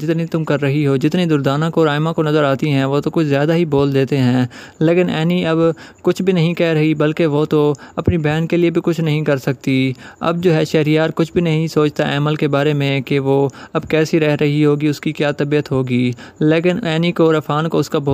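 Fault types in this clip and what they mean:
No faults can be heard anywhere in this clip.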